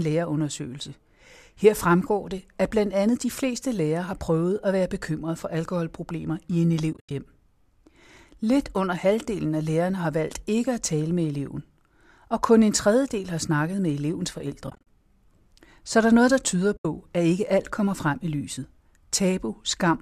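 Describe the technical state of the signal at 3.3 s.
At 3.3 s the speech is intact, with no audible fault; the low-delay AAC compression it likely passed through leaves only light damage here.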